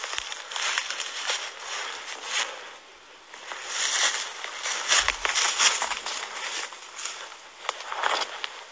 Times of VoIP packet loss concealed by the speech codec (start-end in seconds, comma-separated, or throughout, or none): none